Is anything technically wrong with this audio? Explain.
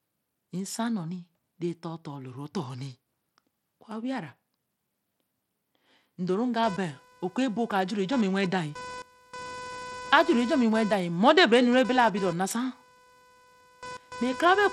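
Yes, two faults are audible.

Bluetooth SBC compression runs throughout. The speech is gritty, with flickering treble and nothing above 16.9 kHz. This is likely SBC's coarse sub-band quantisation starving the upper bands, and the plainly audible damage fits a low bitrate around 96 kbps.

Computer activity noise starts at 6.63 s and continues to the end. Processor or peripheral load disturbs the audio circuit's shared ground, producing a buzz that pulses roughly 500 times a second. It sits fairly loud, only modestly below the speech, and is unrelated to it.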